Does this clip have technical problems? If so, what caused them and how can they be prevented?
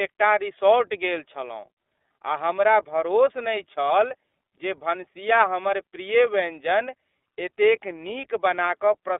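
Yes. The whole clip has passed through the iLBC codec, a narrowband VoIP coder. The speech is band-limited to roughly 300 Hz to 3.6 kHz, so it sounds thin and muffled. iLBC codes each frame's excitation on its own, without using the previous frame. That leaves a plainly audible rough, synthetic texture throughout. The damage fits the 30 ms frame, 13.33 kbps mode. To prevent it, record or transmit with a wideband codec at a higher bitrate.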